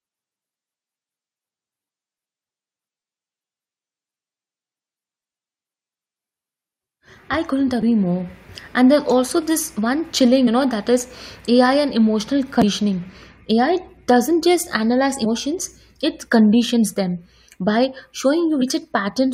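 Damaged data in a compressed stream produces five brief glitches in the speech, at 7.82, 10.46, 12.62, 15.24 to 15.26 and 18.61 s. At each point corrupted bytes make the decoder misread frames and lose sync, yielding a chirp, squawk, click or short hole before decoding recovers.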